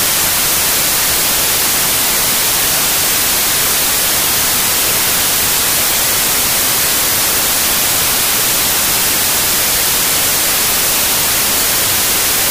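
From start to finish the clip suffers a wrong sample width: the byte stream is being split into samples of the wrong size, and the 1.33 times speed-up fits packed 24-bit data being read as 32-bit words. Each value therefore mixes bytes from neighbouring samples, so only fragments carry the true top bits. The result is loud, harsh noise with the original sound buried inside it, running fast and pitched up throughout.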